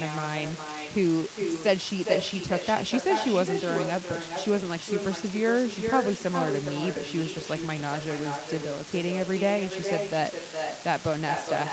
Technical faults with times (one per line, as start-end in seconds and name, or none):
0.00-11.72 unreliable data bit
0.00-11.72 echo leak